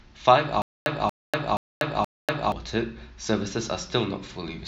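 From 0.62 s to 2.52 s the speech breaks into a stutter with silent gaps: a 233 ms fragment plays, then about 242 ms of digital silence, repeating four times on an even 475 ms cycle. This is likely a stalled player or stream replaying its last buffered piece at each retry, and the speech due in that span is lost. On a waveform, identical blocks alternate with flat silent stretches. A spectrogram shows matching patches separated by empty vertical bands.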